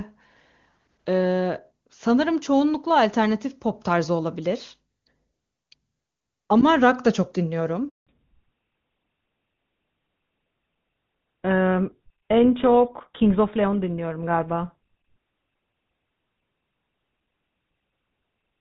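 At 7.89 s the speech cuts out in a handover gap that lasts 180 ms, until 8.07 s. While the call was being passed from one network to another, no speech frames reached the receiving end. The sound fades within a few tens of milliseconds and stays silent until the new link starts carrying audio. On a waveform this shows as a short flat line. On a spectrogram it is a narrow vertical strip with no energy at any frequency.

From 8.07 s to the end, the call has fallen back to narrowband. Before the gap, the HD Voice path carries clean wideband speech, consistent with AMR-WB at its top rate of about 23.85 kbit/s. After it, nothing above 4 kHz remains, which fits a switch to GSM full rate. Sibilants lose their crispness, and the sound turns duller and rougher. On a spectrogram, the energy above 4 kHz stops abruptly at the gap, leaving a hard, flat ceiling for the rest of the clip.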